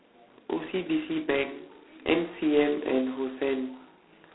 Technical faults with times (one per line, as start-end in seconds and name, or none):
0.00-4.34 G.726 ADPCM